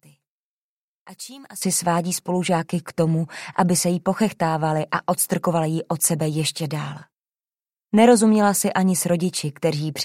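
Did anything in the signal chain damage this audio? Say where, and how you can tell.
Yes. One channel inverted, 0 to 1.62 s: the sound drops by about 17 dB as common content cancels in mono, likely from a polarity-reversed analogue wiring stage.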